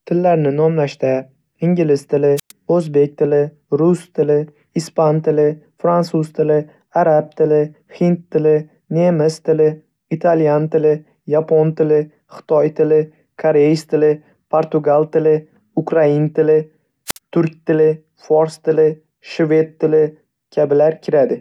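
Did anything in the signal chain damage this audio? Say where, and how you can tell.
Yes. The wireless microphone's radio link shows two wireless microphone squelch dropouts, at 2.36 to 2.52 s and at 17.07 to 17.18 s. The received FM signal weakened until the receiver's squelch shut the output. At each point a short burst of hiss rises, the speech drops into near silence for about 107 ms and then about 54 ms, and the voice comes back.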